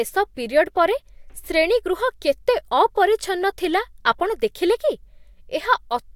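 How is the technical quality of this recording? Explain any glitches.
The technical quality of this recording is good, and there are no glitches to explain.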